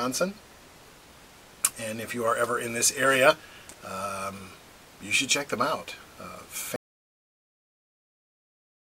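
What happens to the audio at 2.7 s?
Nothing goes wrong at 2.7 s; the audio plays through that moment intact, with no dropout, click or other disturbance.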